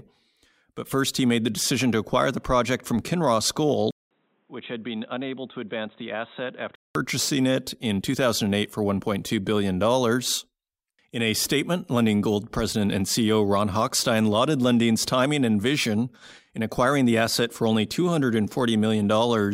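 At 3.91 s, just before "it in", the speech drops out for about 200 ms, then returns dull and boxy, roughly 10 dB quieter, with a new noise floor about 40 dB below it. This is likely an input switched to a poorer device, a narrower-band microphone path. On a spectrogram, everything above 3.9 kHz vanishes in a hard ceiling, and the waveform shows a brief flat gap and smaller peaks. Full bandwidth and level return at 6.95 s.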